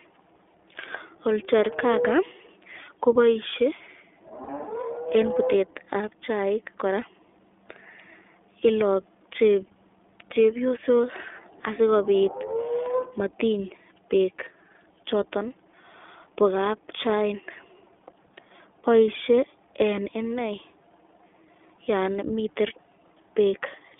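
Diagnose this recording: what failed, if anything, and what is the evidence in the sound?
The codec stage is at fault throughout: the speech has passed through the iLBC codec, and the damage is plainly audible. The voice sits in a telephone band of 300 Hz to 3.5 kHz and sounds rough and slightly synthetic, which fits the 15.2 kbps mode with 20 ms frames. On a spectrogram, energy stops sharply at 3.5 kHz and nothing shows below 300 Hz.

The network stage dropped packets, producing lost iLBC frames from 4.44 to 4.50 s. About 40 ms of real signal is missing, which fits two lost 20 ms frames. The decoder bridged the gap by repeating the last pitch cycle mixed with noise, so it sounds like a brief held, buzzy vowel. Because each frame decodes on its own, clean speech returns immediately. On a waveform this appears as a short run of repeated, near-identical periods. On a spectrogram it shows as flat, frozen harmonic stripes.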